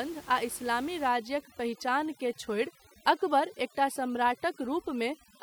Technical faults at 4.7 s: overdone noise removal

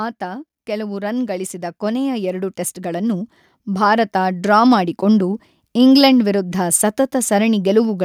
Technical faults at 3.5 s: automatic gain rising

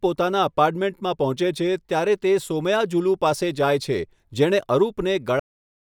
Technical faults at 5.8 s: cut-off end

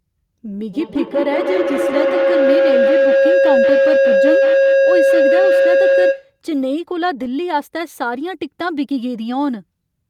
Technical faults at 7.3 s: none

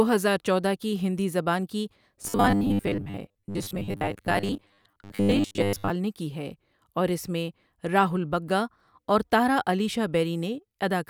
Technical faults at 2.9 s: robotic sound from repeated short buffers

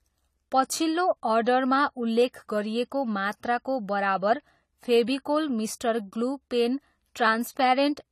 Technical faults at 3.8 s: AAC compression

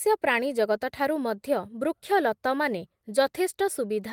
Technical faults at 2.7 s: none

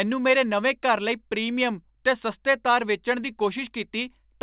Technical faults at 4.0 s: none

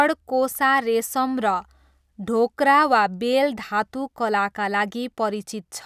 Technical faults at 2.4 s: none

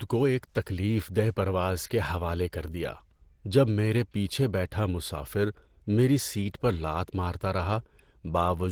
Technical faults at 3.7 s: Opus compression

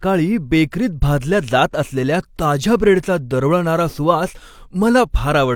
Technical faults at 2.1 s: none

